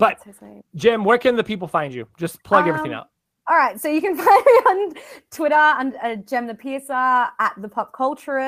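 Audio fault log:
3.95–4.13 s, lost packet rebuilt from error correction: a short run of packets never arrived, but each following packet carried a low-bitrate backup copy through Opus in-band forward error correction, and the decoder played those copies instead. The speech therefore continues without a gap, but this stretch turns rougher and noisier than the audio around it. The affected span fits about 100 ms of rebuilt audio, or roughly five 20 ms packets.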